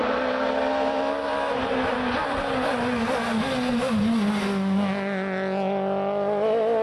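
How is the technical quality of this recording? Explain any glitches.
No glitches or dropouts are audible anywhere in the recording, so there is nothing to explain.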